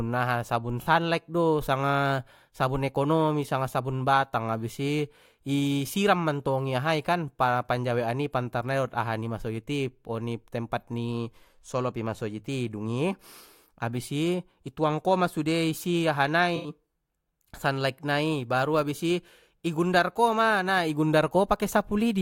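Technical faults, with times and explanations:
0.81–0.87 s and 16.56–16.68 s: AAC frame loss with concealment. The speech breaks into a brief smeared, noisy patch. The first gap lasts about 43 ms, which fits two lost frames. The second lasts about 85 ms, which fits four. The decoder had no data for these spans. It rebuilt them from the last good spectrum. That guess lacks the real detail and phase, so the audio blurs instead of dropping out.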